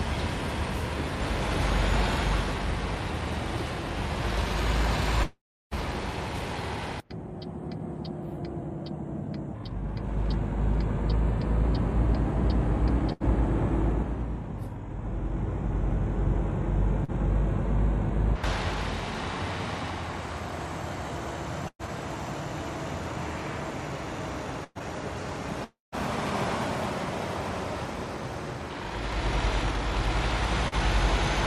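At 5.23 to 5.74 s the sound smears into a fading buzz or hiss, then goes quiet for about 0.31 s before resuming with roughly 0.48 s gone. That's likely a long network dropout. At 13.12 to 13.23 s there's a burst of packet loss: about 80 ms goes missing, patched by the last sound held and faded out. At 17.04 to 17.11 s a short concealed packet loss leaves a brief smear where about 40 ms never arrived and got filled in. From 21.68 to 24.83 s repeated packet loss makes things choppy and robotic: four gaps totalling about 240 ms, the longest 112 ms, each patched over. At 25.64 to 25.95 s the sound fades out, sits silent for about 0.16 s, then comes back with about 0.28 s gone, again likely a long network dropout. At 30.68 to 30.75 s there's another short concealed packet loss, a quick smear over about 40 ms of missing audio.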